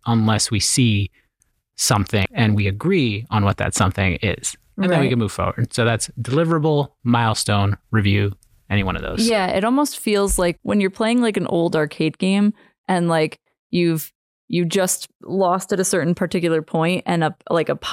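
A short glitch breaks into the speech from 2.22 to 2.26 s, just before "and we agree on". This is damaged data in a compressed stream: corrupted bytes made the decoder misread frames, lose sync and skip ahead to the next frame header.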